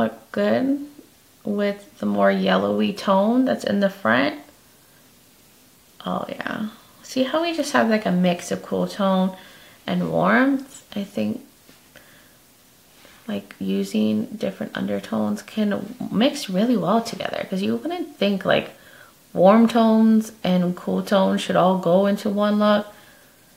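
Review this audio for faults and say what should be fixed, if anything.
Nothing in the recording calls for a fix. No fault can be heard anywhere in the clip, so no correction is needed.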